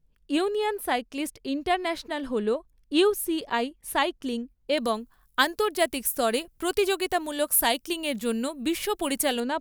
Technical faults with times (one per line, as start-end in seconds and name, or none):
4.78-9.40 pre-emphasis left on